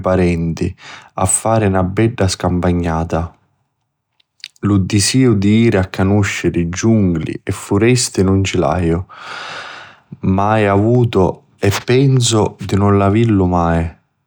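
No technical faults can be heard anywhere in the speech recording, and the signal stays steady and intact throughout.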